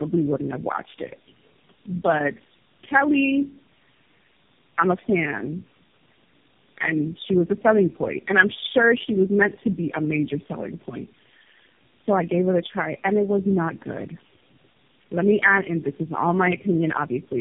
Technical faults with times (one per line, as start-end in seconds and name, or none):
0.00-17.41 tandem speech coding